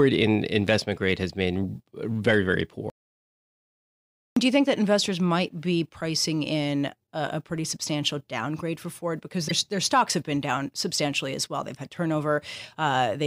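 At 2.90 s the speech cuts off abruptly into dead, total silence, with no room tone underneath, and it resumes at 4.37 s. About 1.46 s of material is simply missing. This is an audio dropout to silence: the input was likely lost for that stretch, through a disconnected device, a failed link or an accidental mute, while the recorder kept writing silence, so nothing spoken during the gap survives.

From 9.47 to 9.52 s there is a brief glitch lasting under 50 ms, where the speech jumps forward. This points to a broken MP3 bit reservoir. Each MP3 frame can borrow bits from earlier frames, and here a frame was likely cut out, so the next one reached back and decoded bytes belonging to the wrong frame. The damage spans roughly two frames, which fits a frame length of about 26 ms.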